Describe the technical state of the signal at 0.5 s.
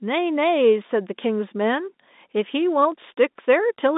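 At 0.5 s the speech is intact, carried through G.711 telephone coding with nothing above about 3.8 kHz, as that line band allows.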